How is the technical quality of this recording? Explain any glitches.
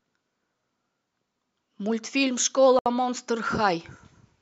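There's one glitch: a gap at a join of encoded pieces, from about 2.79 to 2.86 s. The speech just drops out for roughly 68 ms and then picks up right where it left off, with edges smeared by the codec. It sounds like two separately encoded chunks were stitched together untrimmed, so the encoder's lead-in delay and end-of-frame padding got left in as silence.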